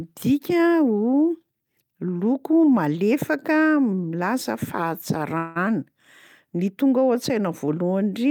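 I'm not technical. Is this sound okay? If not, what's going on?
No. At about 5.37 seconds the speech briefly stalls: for roughly 0.2 seconds, until about 5.58 seconds, the last bit of sound is stretched into a short fading buzz, and then the talking picks up exactly where it left off. This is a call audio freeze. The likely cause is that part of the call's data arrived late, so the receiving end ran out of audio to play and filled the wait. Nothing was lost; the rest simply came slightly later.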